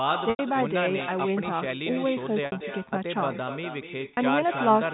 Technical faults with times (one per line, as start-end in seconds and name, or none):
0.00-4.94 echo with no canceller
0.30-0.39 packet loss with pitch repetition
2.46-2.52 packet loss with pitch repetition
4.15-4.17 packet loss with pitch repetition